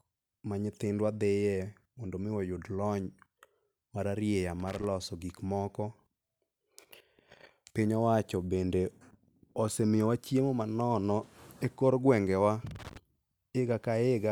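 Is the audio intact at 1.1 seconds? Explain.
Yes, the speech at 1.1 seconds plays through cleanly, with no dropout, click, distortion or other audible fault at that moment.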